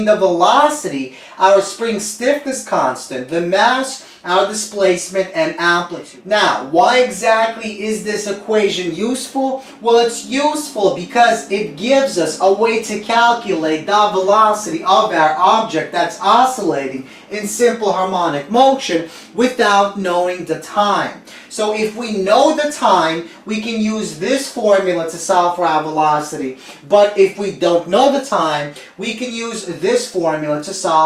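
No technical faults can be heard at any point in the audio.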